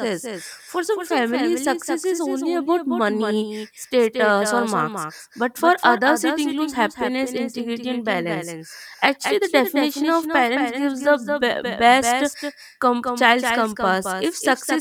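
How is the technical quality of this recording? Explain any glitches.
The main problem is a doubled audio track that runs for the whole clip. A second copy of the speech trails the original by around 200 ms, sitting roughly 5 dB lower. It's most likely the same signal captured twice through a slower path, or two out-of-step copies left in an edit. You hear a dry, full-band slapback on every syllable, with no room tail or decay.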